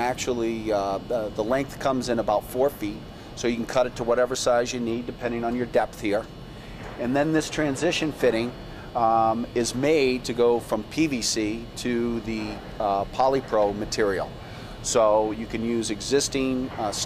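Nothing goes wrong anywhere in the recording, so there's no technical fault to point out here.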